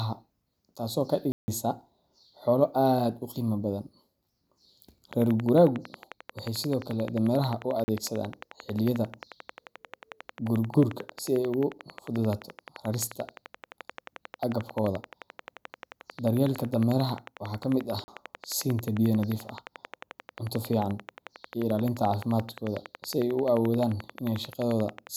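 Speech clip with two faults. Blocks of digital silence cut in at 1.32–1.48 s (160 ms), 7.84–7.88 s and 18.04–18.08 s (40 ms each), as when output buffers go unfilled. A regular train of clicks runs from 5.13 s to 25.08 s, about 11.3 per second, some two hundred in all, peaking around 5 dB above the speech. It likely comes from interference or a faulty connection or power supply.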